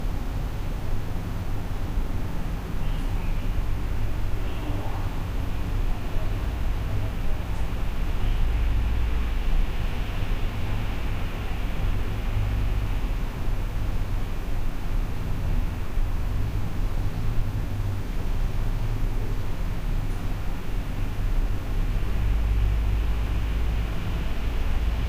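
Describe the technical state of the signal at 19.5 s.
At 19.5 s the audio is intact, with no dropout, distortion, clipping or other fault at that moment.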